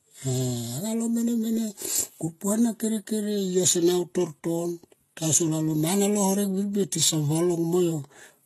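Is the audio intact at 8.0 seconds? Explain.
No. Transcoding between lossy codecs is present at 8.0 seconds, as it is throughout. The sound likely passed through several lossy codecs in turn, each re-encoding the previous one's artefacts and adding its own, so the different artefacts are heard together, with nothing above 12.3 kHz.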